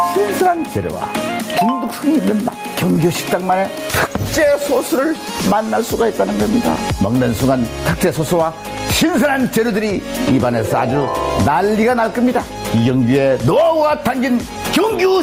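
Gain pumping runs through the whole clip. The level audibly rises and falls as loud sounds come and go, with a swing of around 15 dB, so loud and soft passages sit closer together and the audio sounds squashed. The likely cause is input gain set far too high for the microphone, with a fast limiter or compressor clamping down on every loud moment and then releasing, which makes the level breathe in step with the sound itself.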